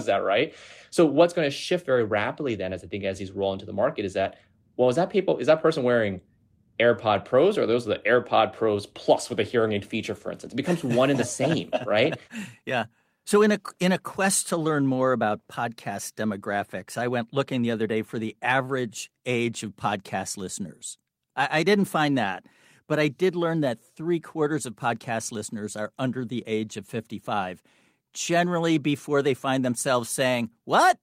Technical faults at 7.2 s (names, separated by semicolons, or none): none